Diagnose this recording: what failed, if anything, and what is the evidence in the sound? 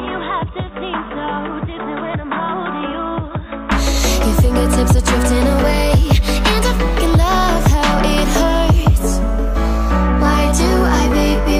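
Until 3.72 s the input was likely switched to a poorer device at the driver stage: the sound stops at 3.8 kHz, sits about 10 dB lower, then opens up.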